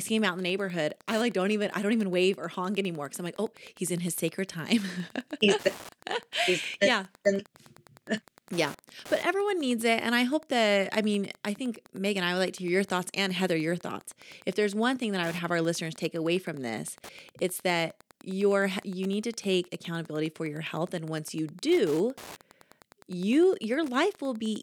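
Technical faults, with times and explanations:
Throughout, Wi-Fi interference: a steady tick repeats every 102.4 ms, close to ten times a second, sitting roughly 25 dB below the speech. A nearby wireless radio's beacon transmissions are being picked up and rectified by the audio circuit, turning each radio pulse into an audible click. The slow, evenly spaced ticking sets it apart from mobile-phone buzz, which chatters at a much faster rate, and from mains hum, which is a continuous tone.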